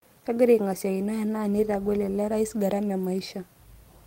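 No technical faults can be heard anywhere in the recording, and the signal stays steady and intact throughout.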